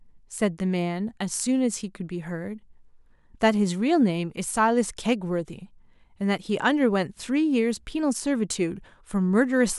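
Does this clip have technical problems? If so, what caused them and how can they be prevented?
No, this speech clip has no audible technical faults. With nothing to trace to a cause, there is nothing here to prevent.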